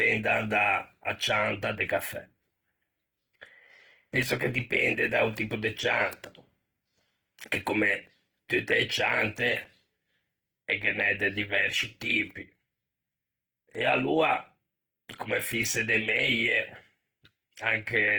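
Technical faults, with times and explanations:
Throughout, Opus compression: the speech sounds grainy and rough, and the damage is plainly audible. Sustained tones turn noisy instead of clean. There is little swirling and no obvious spectral holes, and energy still reaches about 20.1 kHz. This is likely Opus in its music (CELT) mode, which fits a low rate near 16 kbps. With so few bits, the encoder keeps each band's energy but fills it with folded or noise-like content. That causes the grain.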